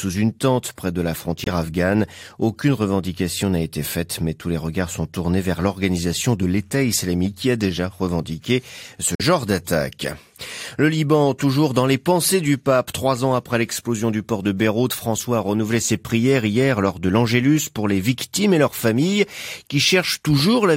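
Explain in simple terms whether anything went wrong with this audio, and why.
Twice the speech suddenly drops into silence for a split second: at 1.44 s, right after "tente près de la", for about 35 ms, and at 9.15 s, after "a déjà revendiqué ce", for about 64 ms. This is a corrupt frame muted. Some compressed chunks of audio were damaged, the decoder rejected them, and the player filled the gap with silence. The second gap's length suggests two lost chunks in a row. The timing of the speech doesn't shift.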